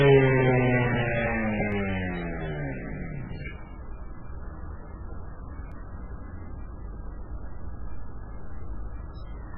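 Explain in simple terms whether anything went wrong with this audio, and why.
Yes, two things went wrong. Throughout, the audio has heavy MP3 compression damage, likely from a very low-quality setting. Nothing is heard above about 5.2 kHz, so the sound is dull, and it has a watery, swirling texture where faint detail keeps dropping in and out.

At 1.72 s and 5.72 s there is a repeated buffer. New audio arrived late, so the player replayed a tiny piece, about 1.3 ms long, once more. A piece that short is heard as a brief click, not a stutter, and a sliver of audio is skipped.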